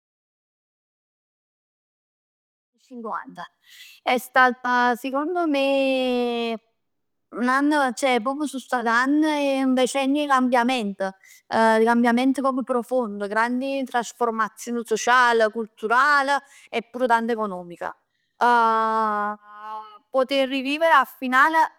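Nothing stood out on listening to this speech recording, which opens with a smooth fade-in that rises from around 2.5 s to full level at 3.59 s.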